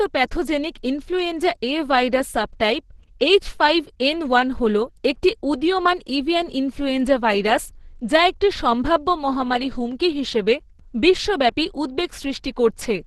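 Throughout, the speech was likely squeezed through Opus compression at a very low bitrate, fitting about 12 kbps in hybrid mode, leaving nothing above 12 kHz and a muffled, hoarse, grainy sound.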